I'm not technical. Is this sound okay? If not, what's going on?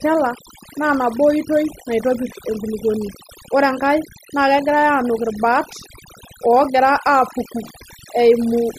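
No. Throughout the recording you can hear overdone noise removal. A cleanup tool meant to remove background hiss was set far too strong, so it also removed the quieter parts of the speech. In the gaps, the background drops to an unnatural near-silence with twinkling specks. A merely muffled recording would sound dull. This one sounds sparkly, and the pauses sound empty rather than naturally quiet.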